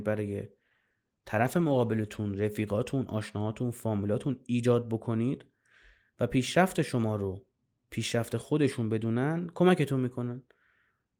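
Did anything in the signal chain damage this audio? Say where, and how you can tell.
Yes. The damage comes at the codec stage, driven by the call's network adaptation. It is a call bitrate drop from 0.52 to 2.93 s. Over that stretch the speech turns rough and watery, then recovers. The worst patch lasts about 1.35 s. The bandwidth estimate fell, so the encoder was given fewer bits and coded more coarsely. The sound fits a fall from 32 kbps to 14 kbps, followed by a return.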